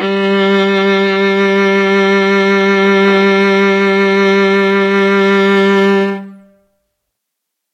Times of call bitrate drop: none

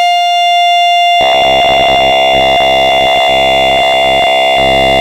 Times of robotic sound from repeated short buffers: 1.21-5.00

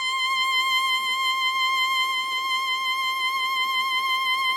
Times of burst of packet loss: none

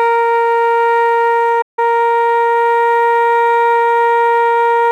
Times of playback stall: 1.61-1.79

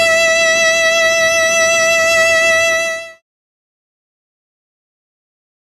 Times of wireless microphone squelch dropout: none

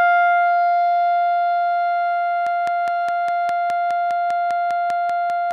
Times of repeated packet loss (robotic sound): none

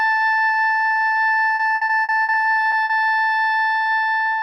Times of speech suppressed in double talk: none

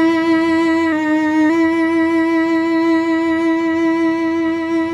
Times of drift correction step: 0.92-1.50

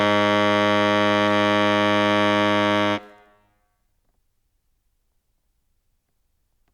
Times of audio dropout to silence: none

